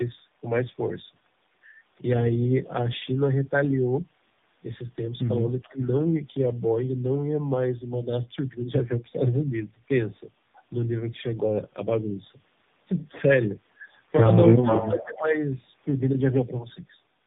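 Right through the clip there's tandem speech coding. Nothing comes through above 3.8 kHz, and the speech sounds rough, muffled and a bit warbly, the way it does when one coder's output gets recoded. That fits two AMR-NB stages at 7.95 kbit/s with a G.711 link between them.

From 5.63 to 5.86 s there's a faint echo leak, a delayed copy of the speech at about 418 ms and about 35 dB down, so it's just a ghostly scrap. Overlapping it, from 5.64 to 5.78 s, the main speech dips by up to about 15 dB for roughly 150 ms. That's speech suppressed in double talk, likely the echo canceller clamping down while both ends were active.

The second round is much worse. From 14.6 to 15.05 s the echo leak returns at about 437 ms delay and only about 5 dB below the speech, so it's nearly as loud as the talker. From 14.62 to 15.35 s the speech again drops by up to about 15 dB, this time over roughly 700 ms, and gets pulled down while the echo sits on top.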